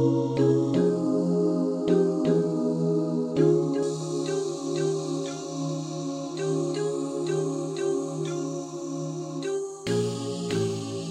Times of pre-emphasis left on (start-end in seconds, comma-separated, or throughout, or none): 3.83-11.10